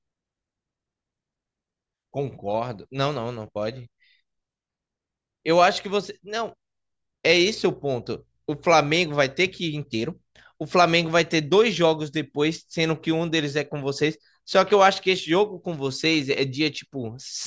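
Nothing in the speech stood out as a technical problem on listening.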